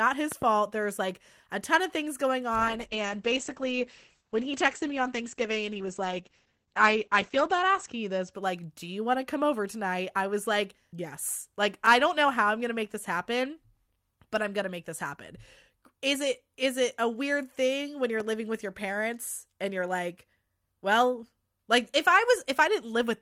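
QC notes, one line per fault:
0.32–0.44 s, loud pop: a quick double pop, two sharp hits close together, landing well above the sound at roughly 10 dB over it, with the audio carrying on underneath. That's the classic signature of a sudden voltage step getting into the chain, likely a plug, switch or static discharge, with the circuitry after it shaping each hit into a short thump.
2.58–8.39 s, call bitrate drop: right after "ton of things going" the sound goes dull and a bit watery, and stays that way until "like do you want". The top end gets chopped off, with the bandwidth falling from about 20 kHz down to 8 kHz, and everything sounds more coarsely coded. That fits the call's encoder being pushed from around 40 kbps down to roughly 10 kbps, and it sits at that lowest rate for about 5.3 s before recovering.
18.20–18.22 s, loud pop: a single short pop between "weird thing when you're" and "living with your parents", smaller than the first pair at only about 5 dB over the sound, with the audio continuing beneath it. 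Same kind of sharp pulse added on top, likely another electrical glitch rather than anything in the source.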